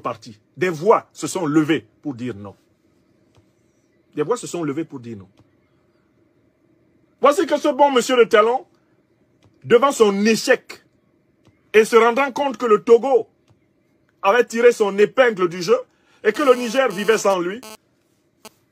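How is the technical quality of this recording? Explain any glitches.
There's one glitch near the end: a GSM phone buzz from 16.35 to 18.48 s. A nearby handset's data bursts at 216.7 Hz get rectified by the audio circuitry, producing a raspy, harmonic-rich buzz that comes and goes, about 20 dB below the signal.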